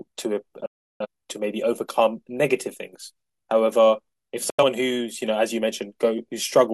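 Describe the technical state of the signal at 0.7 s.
At 0.7 s the signal is inside a digital broadcast dropout running from 0.66 to 1.06 s: the receiver stopped getting valid frames and muted, fading out in about 3 ms. Unlike concealment, nothing is repeated or smeared; the missing speech is simply skipped.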